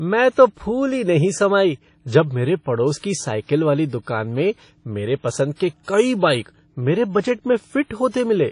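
The whole clip has a washy, ringing quality, with hiss that swells and fades along with the speech, and nothing above about 10.1 kHz. That's likely WMA compression, probably an early WMA version at a low bitrate around 32 kbps, smearing quantisation noise across long blocks.

You'll also catch pre-echo three times, first at 0.30 to 0.33 s just before "तो फूली नहीं समाई", then at 4.02 to 4.07 s after "पड़ोस की साइकिल वाली", and at 5.55 to 5.60 s before "के कई बाइक मेरे". Each time a short hiss of about 35 to 49 ms creeps in ahead of a sharp onset, because noise sized for the loud attack spills into the quiet gap before it and softens the hit.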